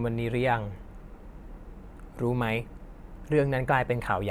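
No technical faults heard.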